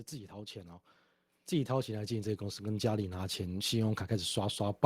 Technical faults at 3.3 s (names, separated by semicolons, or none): automatic gain rising